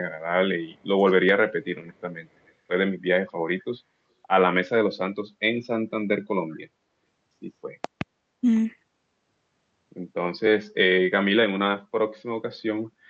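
Between 0.71 and 0.77 s, and again from 2.44 to 2.48 s, there are brief echo leaks: a delayed copy of the speech arriving about 181 ms late, very faint at roughly 40 dB below the direct voice. The likely cause is a far-end echo canceller that let through part of what its loudspeaker fed into its microphone. Each echo is heard as a short ghost trailing the speech, band-limited like the rest of the call path at about 8 kHz.

From 7.84 to 8.03 s comes a loud pop, actually two sharp transients in quick succession, peaking around 15 dB above the surrounding signal while the speech continues underneath. This is likely a voltage step or pulse from a plug, switch, static discharge or driver glitch, which the following circuitry shapes into a hard, clicky thump.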